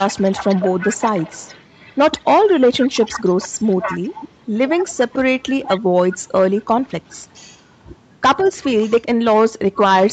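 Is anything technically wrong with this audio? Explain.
Yes, there are two problems.

The first is an echo leak: a faint copy of the speech trailing the original by 159 ms, from 0.0 to 2.21 s, 2.72 to 5.8 s, 6.11 to 7.17 s and 8.61 to 8.87 s. It starts about 15 dB down and fades to about 25 dB down. The likely cause is a far-end loudspeaker whose echo canceller didn't fully scrub its mic feed.

The second is speech suppressed in double talk, from 9.0 to 9.84 s. For about half a second in total the talker drops away in chunks, by as much as roughly 30 dB. That's likely the echo canceller mistaking both sides talking at once for echo and ducking everything.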